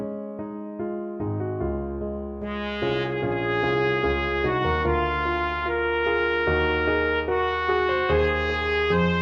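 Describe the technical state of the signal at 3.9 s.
At 3.9 s the quality suddenly drops, with rising codec artefacts from 3.73 to 5.73 s: an adaptive stream at a lower bitrate, apparently switching to a very low-rate HE-AAC version.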